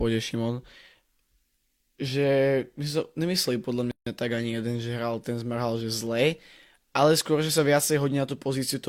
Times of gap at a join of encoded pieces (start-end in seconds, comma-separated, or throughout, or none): 3.91-4.07